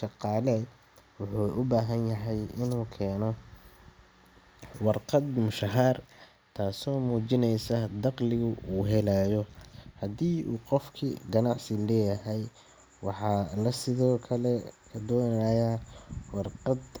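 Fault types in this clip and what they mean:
Nothing wrong turns up anywhere in this recording, so there are no fault types to list.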